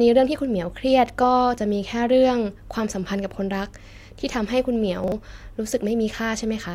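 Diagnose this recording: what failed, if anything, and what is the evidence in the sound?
At the driver or buffer stage, chunks of audio were delivered out of order: one 40 ms chunk was handed on a single chunk late, so it plays after the chunk that should follow it. Between 5.04 and 5.12 s the speech jumbles briefly, with two 40 ms pieces swapped. Nothing is missing, but the three hard joins around and between the swapped chunks produce a garbled moment.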